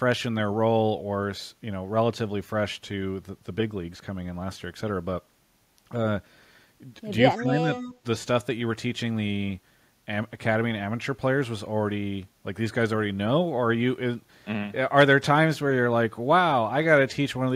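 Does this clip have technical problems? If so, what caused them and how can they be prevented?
Yes. From 7.35 to 7.69 s the speech dips by roughly 10 dB for about a third of a second. This is speech suppressed in double talk, likely from an echo canceller muting its own talker while the far side spoke. The waveform shows a sudden envelope sag. Better double-talk detection, or headsets in place of loudspeakers, prevents it.

From 7.73 to 7.94 s there is an echo leak: a fainter copy of the speech, around 10 dB down, trailing by 148 ms. It likely comes from residual loudspeaker pickup that the far end's canceller didn't remove. The spectrogram shows the same harmonic pattern shifted right and dimmer. Tuning the far end's echo cancellation, or lowering its speaker volume, prevents it.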